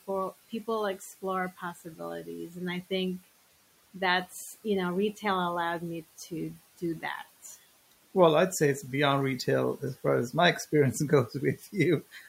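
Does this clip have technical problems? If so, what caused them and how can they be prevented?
Yes. Speech cut by the noise suppressor occurs at 1.57–2.91 s, 3.94–4.65 s, 5.13–5.24 s, 5.80–7.04 s and 11.29–11.74 s. In each stretch the suppressor mistook the quieter parts of the speech for background and pulled them down by about 10 to 12 dB. Soft consonants and syllable tails sound swallowed, in brief dips adding up to at most about a third of a second per stretch. With the room noise already about 20 dB below the speech, a gentler suppression setting that protects low-level speech would prevent this.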